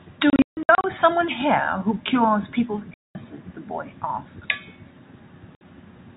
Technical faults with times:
0.30-0.84 packet loss filled with silence
2.94-3.15 packet loss filled with silence
5.55-5.61 packet loss filled with silence

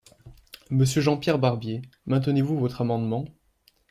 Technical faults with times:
none

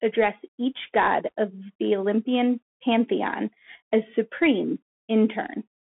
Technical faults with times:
0.00-5.86 Bluetooth CVSD headset codec

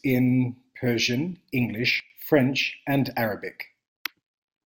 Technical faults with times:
2.00-2.10 sudden gain jump

